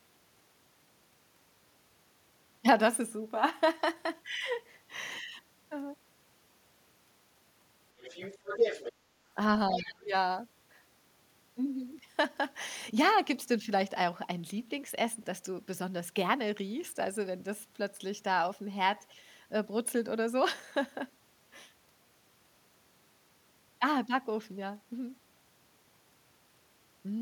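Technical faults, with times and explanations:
7.98–8.93 s, other side's voice leaking through: A second voice sits under the talker for almost a second, only about 5 dB below the main speech. This is likely residual loudspeaker echo that the echo canceller failed to subtract from the microphone. On a spectrogram a second, independent set of harmonic striations overlaps the talker's. The waveform envelope stays filled in where pauses would otherwise be.
9.77–9.83 s, other side's voice leaking through: A brief scrap of the far voice, about 15 dB below the speech, appears as a faint fragment. It is again likely echo slipping past cancellation. On a spectrogram it is a short, weak smear of extra harmonics.
9.70–10.13 s, speech suppressed in double talk: The talker's level sinks by around 25 dB, with about 0.4 s affected in total. This likely happens because both sides spoke together and the echo canceller attenuated everything rather than risk passing echo. 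The waveform shows the envelope pinched down. On a spectrogram the energy thins out.
10.55–10.57 s, Bluetooth stutter: A single 23 ms slice plays back a second time, heard as a tiny hiccup or click-like doubling before the speech continues slightly further along. This fits one lost wireless audio packet that the receiver covered by replaying its previous buffer. On a waveform the same short cycle pattern appears twice in a row. A spectrogram shows a thin vertical seam where the spectral content repeats.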